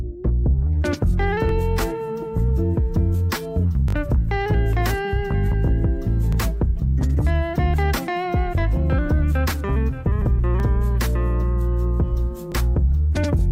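At 1.49 to 1.51 s the audio hiccups with a Bluetooth stutter. A packet failed to arrive in time, so the receiver filled about 20 ms by replaying its last slice. At 3.88 to 3.95 s the gap is longer, about 61 ms, which fits roughly three missing packets. The repeats there run together into a brief machine-gun buzz. Single 20 ms repeats follow at 6.33 to 6.35 s and 12.52 to 12.54 s.

What marks these as stutter is the repetition: a fragment is heard again before the sound picks up further on.

At 10.6 s there is a tiny jump in the sound. This is likely a dropped buffer (overrun), where samples were overwritten before being read and the two sides were joined directly. Only a few milliseconds go missing. Unlike the stutters, nothing repeats and there is no buzz, just a skip forward.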